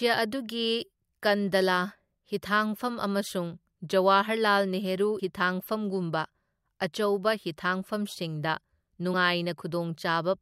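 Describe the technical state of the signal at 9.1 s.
At 9.13 s there is damaged data in a compressed stream: the decoder loses frame sync and searches for the next frame header, leaving a brief glitch that ends by 9.14 s.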